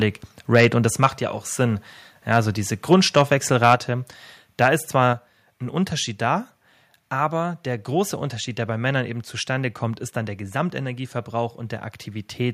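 It's a speech clip where the loudest syllables crack harshly at 0.54–0.66, 1.03–1.06 (between "und das" and "ja auch"), 2.33–2.37, 2.93–3.22 (right after "also diese"), 3.63–3.74 and 4.62–4.66 s. That's microphone overload, likely from the input gain being set so high that peaks ran about 2 to 5 dB past the converter's ceiling and got their tops sheared off. Then the microphone volume stepped down twice, at 3.75 and 5.13 s, each time dropping voice and background together by about 4 dB in a single jump. The first step lands right after a clipped peak, which fits the call software likely spotting the overload and pulling the device input down.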